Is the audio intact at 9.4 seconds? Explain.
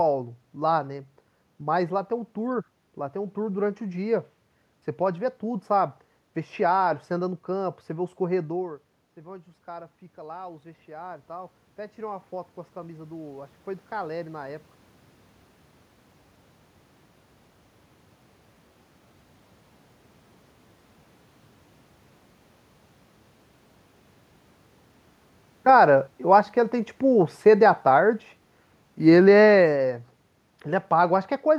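No. Voice and room noise swell together from 7.93 to 14.73 s: automatic gain rising, the control lifting gain by about 10 dB after the input fell about 17 dB.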